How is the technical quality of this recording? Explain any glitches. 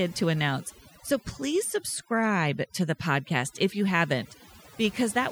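The recording suffers from overdone noise removal that runs throughout. A noise reducer set too aggressively drops individual frequency bands whenever they sit close to its noise estimate, taking quieter parts of the speech with them. The background drops and breaks up into twinkling specks.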